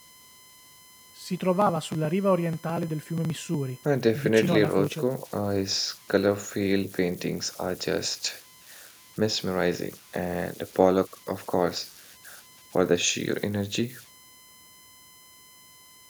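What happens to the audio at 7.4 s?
At 7.4 s, converter idle tones run through the whole clip. An undithered converter cycles in repeating bit patterns, leaving a whistle around 1 kHz, about 25 dB below the speech.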